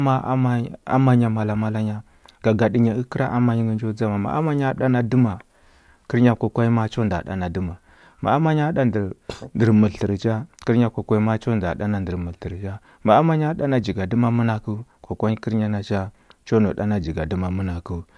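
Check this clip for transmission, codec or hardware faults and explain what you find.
Checking this clip turned up no faults to explain.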